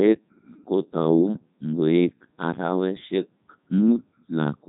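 Throughout, the speech carries heavy Codec 2 vocoder damage, which fits the 3.2 kbit/s mode. Only pitch, voicing, energy and a spectral envelope survive, resynthesised from sine waves, so it sounds robotic and buzzy. A spectrogram shows clean, regular harmonic stripes ending at 3.8 kHz.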